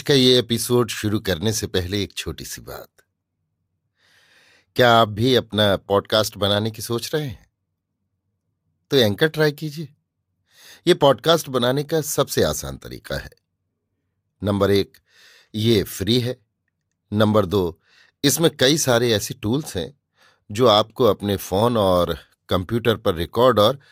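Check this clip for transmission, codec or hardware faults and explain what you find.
Nothing turned up here worth flagging: the speech comes through steady and intact, with no sign of trouble from the transmission, the encoding or the hardware.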